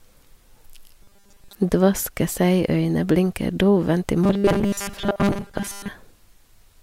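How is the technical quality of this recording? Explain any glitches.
The speech has two glitches, both robotic sound from repeated short buffers, at 1.02 to 1.55 s and at 4.24 to 5.89 s, just after "dovent i". Audio likely arrived too seldom, so a 5 ms chunk was replayed while most of the real audio was skipped. That produces a rigid, metallic 200 Hz buzz that loosely follows the speech.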